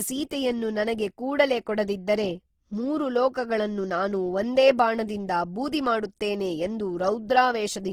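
Speech with audible codec damage throughout: tones sound rough, grainy and noisy rather than swirly, while the bandwidth stays full, reaching about 20.3 kHz. The likely cause is Opus compression in its music (CELT) mode, with the roughness pointing to a low bitrate near 16 kbps.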